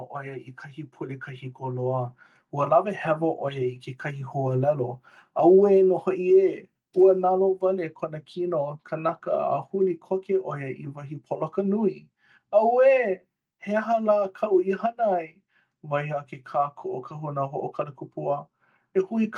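Automatic gain rising from 0.16 to 4.38 s: the gain control judges the speech too quiet and lifts it by about 10 dB, so voice and background swell together.

Automatic gain falling from 5.37 to 7.57 s: now judging the input too loud, the control eases gain down by about 4 dB, and the speech sinks along with its background.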